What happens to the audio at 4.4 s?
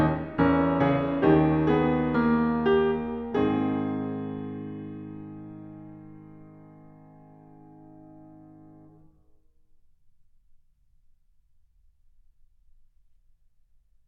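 Nothing goes wrong at 4.4 s: the music plays through that moment intact, with no dropout, click or other fault.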